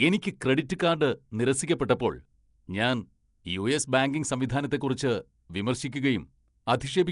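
Speech, with plainly audible Nellymoser compression throughout, likely at a rate near 44 kbps. It gives a hissy, smeared, underwater sound, and a spectrogram shows speckled noise-filled bands and a hard ceiling at 10.6 kHz.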